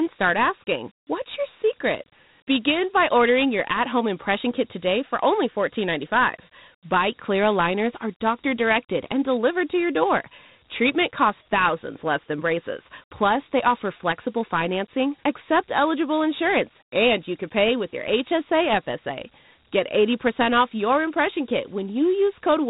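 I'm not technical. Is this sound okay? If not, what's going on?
No, the whole clip has Dialogic VOX ADPCM damage, an old phone-system format that cuts everything above about 3.9 kHz and leaves gritty hiss trailing the speech.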